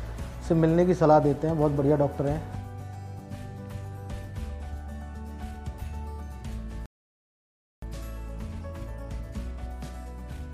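At 6.86 s the sound just stops dead in mid-flow and stays silent until 7.82 s, a gap of almost a full second. That's a playback stall. The most likely cause is the player running dry of data or its output thread getting blocked, so nothing reached the output until it recovered. When the audio comes back, it continues from where it broke off rather than jumping ahead.

Right after the gap, from 7.82 s through to the end, you get time-compressed catch-up. The player is working off the backlog that built up during the stall by cutting out tiny slices and cross-fading over the joins. It runs at about 1.1 times normal speed but keeps its normal pitch, so it comes across as slightly hurried.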